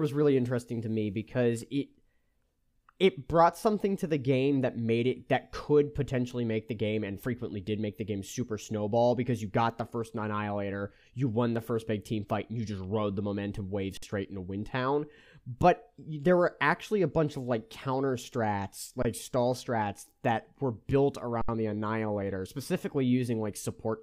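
Three underruns with held sample occur: after "rode the momentum wave" at 13.97–14.03 s (53 ms), after "of like counter strats" at 19.02–19.05 s (23 ms, which fits a 1024-sample buffer), and after "that were built" at 21.42–21.49 s (70 ms). Each time, the converter holds its last value as a flat level, so the sound stops with little or no click. Nothing is skipped, and playback resumes softly where it paused.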